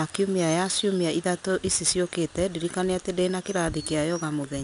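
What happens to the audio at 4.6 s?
At 4.6 s the speech still carries the 4-bit ADPCM compression that runs through the whole clip. Each sample is coded as a coarse step from a prediction, so a gritty hiss rides on the louder sounds, and nothing comes through above about 10.6 kHz, which dulls the top end.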